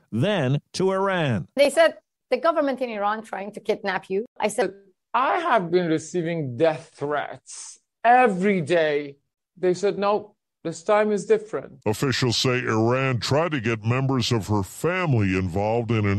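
Speech recording with a section at the wrong speed from 4.62 s to the end. Playback drops to 0.814 times normal, so the audio turns slower and about four semitones deeper together, likely from a clock mismatch. A pitch shift or time-stretch would change only one.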